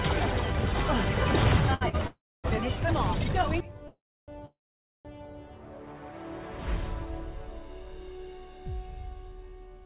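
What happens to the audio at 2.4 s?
A call audio freeze runs from 2.07 to 2.46 s, so 2.4 s falls near its end. The likely cause is packets held up in transit, draining the jitter buffer. The receiver stretches the last sound into a fading buzz or hiss that drops to silence for about 0.27 s, then resumes where it stopped. Nothing is lost, but everything after it now arrives about 0.37 s late, still band-limited below 4 kHz by the G.711 call path.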